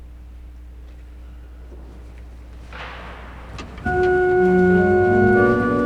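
From the first moment to the last, a steady mains hum sits under the audio: a low, constant tone at 60 Hz, with some low harmonics above it, at roughly 20 dB below the programme level. Power-line current has leaked into the signal path through a ground loop or a nearby transformer. On a spectrogram it appears as an unbroken horizontal line at 60 Hz with weaker stripes at its multiples. The waveform carries a fine periodic ripple even in quiet gaps.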